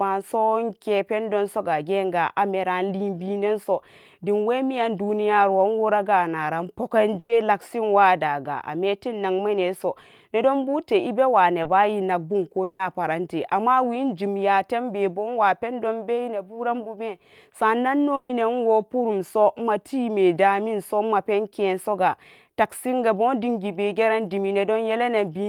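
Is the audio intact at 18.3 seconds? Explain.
No. At 18.3 seconds the speech is inside a burst of packet loss that runs from 18.15 to 18.31 s. Several packets in a row never arrived in time to be played. The receiver filled about 140 ms by extending the last sound it had and fading it down, so the gap comes across as a held, dimming tail. About 140 ms of the original speech is missing, and the audio picks up again just after 18.31 s.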